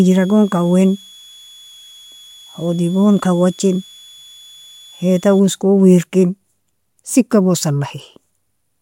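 From 0.0 to 5.39 s, a switching supply whistle, a high tone drifting between 3.3 and 3.5 kHz about 30 dB below the speech, draws a thin wavering line on a spectrogram.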